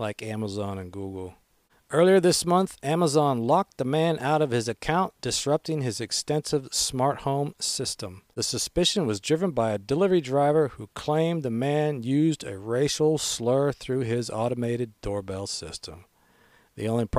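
A listen to this speech recording turns up nothing technically wrong anywhere in it.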